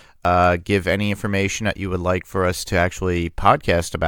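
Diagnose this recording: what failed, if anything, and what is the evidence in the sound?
Nothing failed; the speech recording shows no audible defect at any stage of the signal chain.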